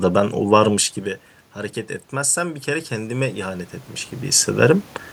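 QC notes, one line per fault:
1.54 to 4.92 s, automatic gain rising: the level reaching the microphone fell by about 12 dB, and the automatic gain control responded by slowly pushing its gain up by about 5 dB over more than three seconds. Because the gain acts on everything it receives, the room noise swells along with the speech, giving a gradual breathing lift rather than a step. The talker's movement around 4 s is a natural level shift, not part of this fault.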